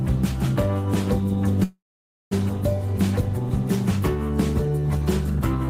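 At 1.63 s a call audio freeze sets in: the last sound smears into a fading buzz, drops to silence until 2.33 s, then resumes intact, likely from late packets draining the jitter buffer.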